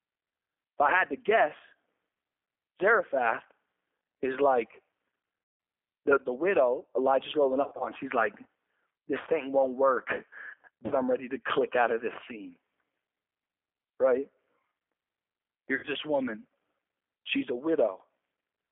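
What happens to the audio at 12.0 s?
At 12.0 s, as throughout, the speech sounds muffled, slightly rough and synthetic, confined to roughly 300 Hz to 3.4 kHz. This is G.729 codec damage, consistent with an 8 kbit/s model-based rebuild of the voice.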